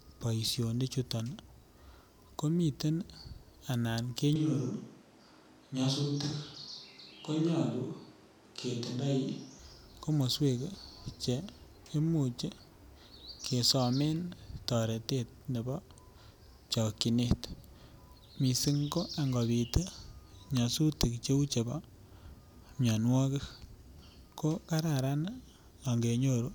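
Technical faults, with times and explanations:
4.36 to 9.59 s, switch to a distant microphone: the voice suddenly goes roomy and hollow, loses its low end, and then snaps back just as abruptly. The close mic's signal has most likely dropped out, leaving a mic further from the talker carrying the speech, so the room reflections take over. Interestingly the level hardly shifts, and the background noise stays low, somewhere around 35 dB under the speech.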